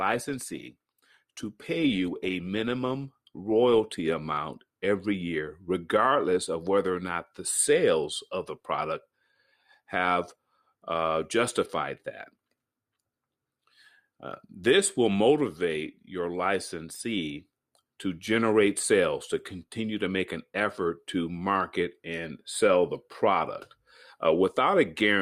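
Speech, opening on an adaptive stream starting at a low bitrate: dull, artefact-heavy treble until 4.0 s, then an abrupt, gapless jump in clarity, consistent with roughly 24 to 64 kbit/s Opus.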